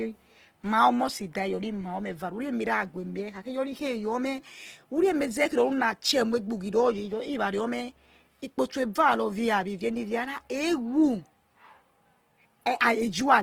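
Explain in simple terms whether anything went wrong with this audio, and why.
Something did go wrong, and it lasts the whole clip. The speech sounds rough and grainy instead of smooth. This points to Opus compression, likely squeezed to a very small file size. When the encoder runs short of data, it fills the gaps with copied or invented noise. The full range of brightness stays, but the detail inside it is lost.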